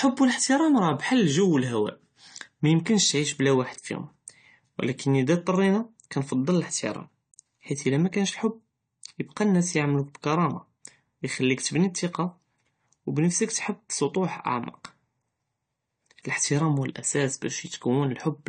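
A speech recording, likely passed through AAC compression at a low bitrate, which fits an AAC-LC stream of around 32 kbps. Throughout, nothing sounds above 9 kHz, and plainly audible codec damage leaves the sound dull and smeared, with fizzy, warbling sibilants.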